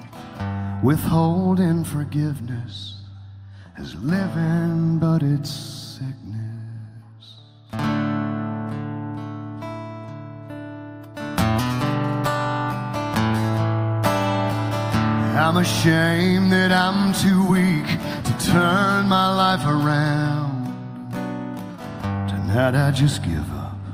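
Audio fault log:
No faults detected in this clip.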